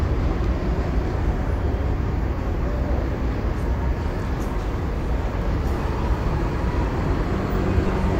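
At 7.87 to 7.89 s, lost LE Audio frames, about 15 ms, fitting two dropped frames, become a brief noisy smear as the decoder repeats spectrum with random signs; a spectrogram shows a short smudge.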